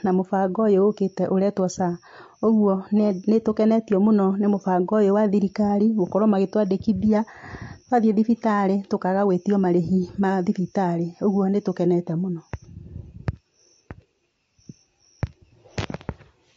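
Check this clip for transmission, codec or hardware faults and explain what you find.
One codec fault runs through the whole speech clip. From start to finish the voice sounds rough and grainy, with plainly audible damage. The likely cause is low-delay AAC compression. Its short frames separate pitch harmonics poorly, so noise fills the gaps between them. The damage level fits a bitrate around 32 kbps.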